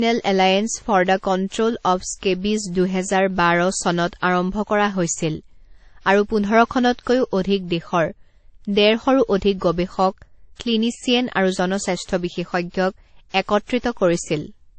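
From start to finish the speech has no content above about 8.3 kHz, and two different kinds of coding damage sit on top of each other. That mix points to transcoding between lossy codecs, likely a WMA encode near 64 kbit/s followed by MP3 near 34 kbit/s. A single low-rate encode would leave one consistent artefact character; here the MP3 stage has spent its bits re-encoding the earlier flaws and added its own.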